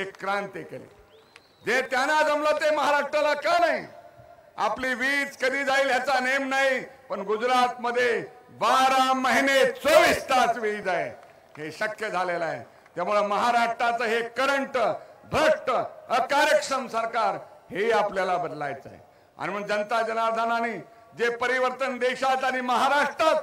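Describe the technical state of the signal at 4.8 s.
At 4.8 s there is an overlap between stream segments, from 4.84 to 4.86 s. Two consecutive segments claimed the same stretch of time, so the player discarded the shared portion. But that sound had not actually been duplicated. About 22 ms of real audio is lost, and the waveform jumps straight across the gap. It is heard as a brief click or tiny skip. The timing points to segments roughly one second long.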